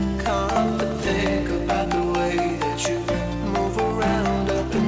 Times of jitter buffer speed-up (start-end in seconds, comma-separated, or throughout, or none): 1.14-1.86